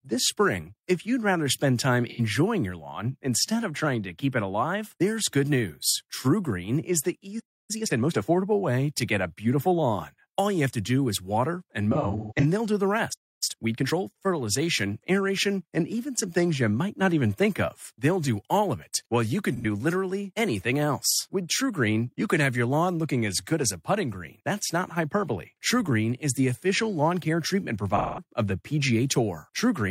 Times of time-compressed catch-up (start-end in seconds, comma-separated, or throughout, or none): 7.71-8.29, 13.43-13.99